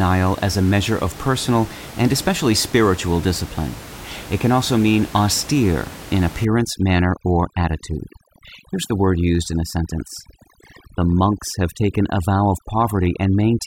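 Overdone noise removal runs from 6.45 s to the end: bands near the noise estimate are cut hard, leaving twinkling near-silence.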